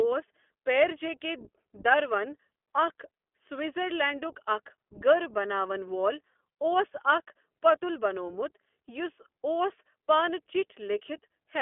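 Throughout, the speech carries the iLBC codec's narrowband sound: a spectrogram shows nothing below 250 Hz or above 3.4 kHz, with plainly audible roughness suggesting its 15.2 kbps, 20 ms-frame mode.

From 4.08 to 4.11 s, just before "اَکھ گٔر بَناوَن وول", one lost iLBC frame is concealed by a repeated, noise-blended pitch cycle, heard as a brief buzzy hold and seen as uniform periodic waveform cycles.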